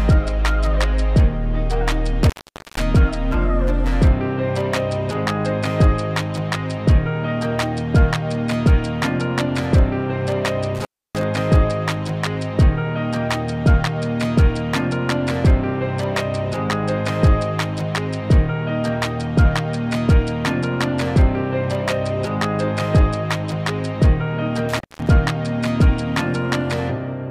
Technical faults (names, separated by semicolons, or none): intermittent contact